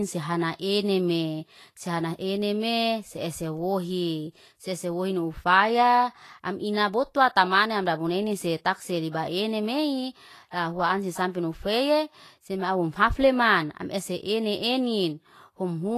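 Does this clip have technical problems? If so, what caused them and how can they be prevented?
Yes. Throughout the speech there is a grainy, hissy roughness in the treble, with smeared consonant attacks and nothing above about 14.2 kHz. This is likely Vorbis compression at a low setting, consistent with roughly 33 kbps: the encoder keeps a smooth spectral floor but quantises the high residue so coarsely that detail turns into noise of similar energy. That noise-like grain, rather than a clean dull top, separates it from simple low-pass filtering. Encoding at a higher quality setting prevents it.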